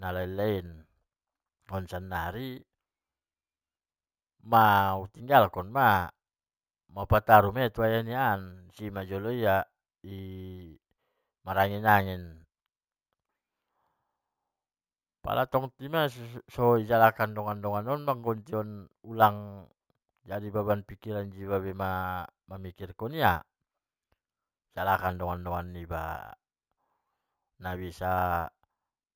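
From start to finish, the speech carries imaging from sample-and-hold upsampling. Each sample was simply repeated to reach a higher rate, with no smoothing filter after. That leaves mirrored copies of the speech spectrum above the original band. The first copy spans 8 to 16 kHz, about 21 dB below the speech. This fits audio at 16 kHz raised to 48 kHz. It sounds like a bright, metallic fizz that rises and falls with the voice.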